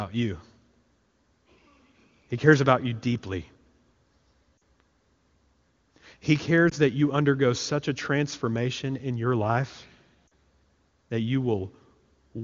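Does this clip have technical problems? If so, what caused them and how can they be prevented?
Yes: lost AMR speech frames at 4.60 s, 6.70 to 6.74 s just before "that you undergo such", and 10.28 to 10.31 s just after "transformation in your life". Radio errors corrupted one or two 20 ms frames each time, so the decoder repeated the last good pitch and vocal tract settings at falling gain, giving brief dips and warbles. On a spectrogram, harmonics smear flat and fade; the waveform shows a short sag in amplitude. The AMR wideband (HD Voice) coding sounds clean, which fits its top rate. Stronger radio coverage or better channel error protection would prevent these losses.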